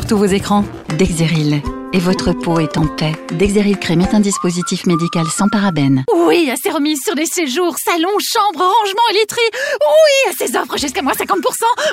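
At 2.17 s, a repeated buffer: fresh audio reached the device late, so it replayed its last block, about 5.8 ms long, which fits a 256-sample buffer, three extra times. The hard-joined repeats give a brief buzzing click, and roughly 20 ms of new sound is lost.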